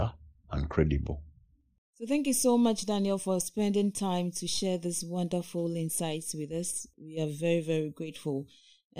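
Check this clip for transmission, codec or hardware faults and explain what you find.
One fault is present: channel delay (comb filtering) from 1.00 s to the end. One channel arrives roughly a third of a millisecond late, so summing to mono cancels shared content at evenly spaced frequencies, the first notch around 1.5 kHz. The speech sounds hollow and phasey. Unlike flanging, these notches stay fixed rather than sweeping.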